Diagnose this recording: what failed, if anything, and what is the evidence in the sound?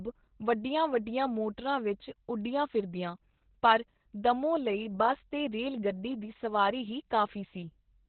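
Opus voice compression at the codec stage, throughout: nothing above 4.2 kHz, with hoarse, slightly robotic speech from coarse excitation, unlike a clean low-pass filter, fitting a very low bitrate near 8 kbps.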